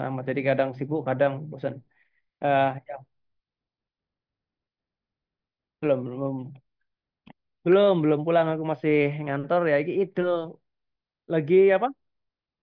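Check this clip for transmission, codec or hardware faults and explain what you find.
Listening through the speech, I hear no transmission, codec or hardware fault anywhere in the signal.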